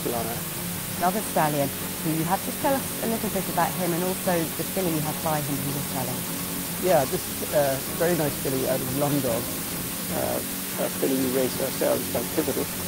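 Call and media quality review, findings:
Constant, even hiss across the whole clip, nearly as loud as the signal itself. No distortion. Low bit depth with dither, which fits a roughly 4-bit path. Dither turns rounding error into steady white noise. Likely a bad converter or format stage.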